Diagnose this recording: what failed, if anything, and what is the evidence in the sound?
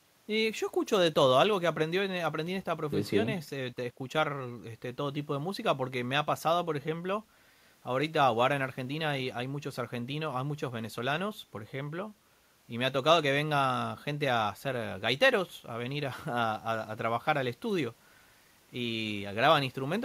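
Nothing failed; the recording gives no audible evidence of a fault at any point.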